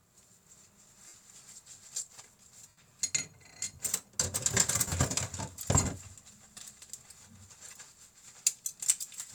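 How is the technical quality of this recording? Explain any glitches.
The recording has three short dropouts where lost LE Audio frames were concealed, at 1.08–1.14 s (60 ms), 2.68–2.77 s (90 ms) and 4.88–4.92 s (about 40 ms). The LC3 decoder repeats the last spectrum with randomised signs, so tones turn into a brief noisy smear. On a spectrogram each gap shows as a blurred, fading vertical band, and the waveform envelope dips at the same points. The light codec compression leaves at most a faint watery texture on noise and attacks.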